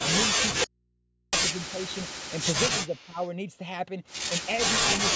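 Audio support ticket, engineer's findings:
Audio dropout to a faint residue, 0.64 to 1.33 s. Likely cause: signal lost upstream while the path after the break stayed open. About 0.69 s of speech gone at once, not faded. The gap holds only mains hum, around 45 dB below the speech level, before the audio cuts back in mid-flow.

Speech suppressed in double talk, two spots. Likely cause: the echo canceller could not tell the near talker from loudspeaker echo while both sides spoke, and attenuated everything. At 1.55 to 1.88 s, a shallow dip of a few dB across roughly a tenth of a second. At 3.01 to 3.17 s, a deeper cut near 10 dB for about 150 ms.

Echo leak, 2.87 to 3.30 s. Likely cause: residual loudspeaker pickup on one end not fully cancelled and sent back. A faint delayed copy of the speech trails 326 ms behind, roughly 30 dB under the direct signal, and overlaps the second suppression. 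Sits within the normal 8 kHz call band.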